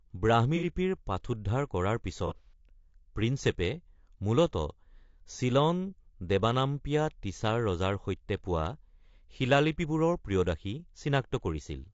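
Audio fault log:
Throughout: low-delay AAC compression. The sound is rough and grainy, with noise filling the gaps between pitch harmonics and a thin, synthetic top band. This is likely low-delay AAC around 32 kbps, whose short frames resolve harmonics poorly, unlike the swirly artefacts of longer-frame codecs.
0.56–0.65 s and 2.27–2.53 s: AAC frame loss with concealment. The first patch replaces about 60 ms, fitting two lost frames. The second scatters about 120 ms of losses in short runs of roughly 30 ms across 240 ms. The decoder repeats the last good spectrum, so these stretches sound smeared and noisy rather than dropping to silence as a plain dropout would.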